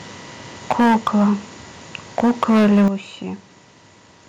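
Speech with microphone overload from 0.7 to 1.3 s and again from 2.18 to 2.88 s. The peaks are flattened against the converter ceiling, running about 9 dB and about 8 dB over, with roughly a tenth and then a fifth of samples clipped. This gives the loudest syllables a harsh crackle, likely from input gain set too high. The microphone volume stepped down at 0.80 s by about 2 dB and at 2.88 s by about 9 dB. Voice and background drop together, likely from call software cutting the input gain after detecting clipping.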